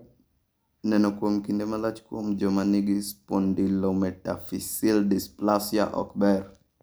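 A short piece of speech, and nothing in it sounds technically wrong at any point.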